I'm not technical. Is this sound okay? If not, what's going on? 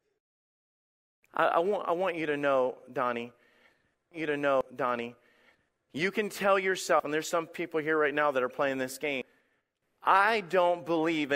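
No, this speech clip has two kinds of problem.

First, a stream segment repeated. Between 4.11 and 5.86 s, a stretch of the speech plays a second time, with a small blip where it jumps back, just before "you can tell". The player fetched or queued the same chunk twice, which adds about 2 seconds of repeated talk.

Second, there are short skips at 4.61, 5.55 (just before "you can tell"), 7.00 (between "you can tell" and "and there's some people") and 9.22 s. At each one, a short piece of speech, roughly 0.1 to 0.15 seconds, simply vanishes, and the sound jumps ahead with no gap of silence. This is likely a dropped buffer (overrun): the program didn't collect the audio in time, so that piece was overwritten and the two sides were joined directly.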